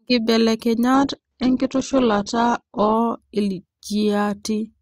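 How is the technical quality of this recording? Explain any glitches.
There is one glitch. From 0.94 to 2.94 s the speech turns dull, with nothing above 8.2 kHz and more codec artefacts, then snaps back without a gap. This is an adaptive stream at a lower bitrate: a slowed connection forced a leaner encoding, consistent with Opus dropping from about 64 to 12 kbit/s.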